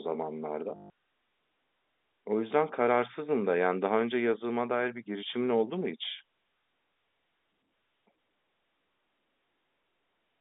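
Speech over a G.711 telephone-band line (roughly 250 Hz to 3.7 kHz) has packet loss with the last packet repeated from 0.76 to 0.9 s: a 140 ms robotic stutter buzzing near 50 Hz, which fits seven lost 20 ms packets.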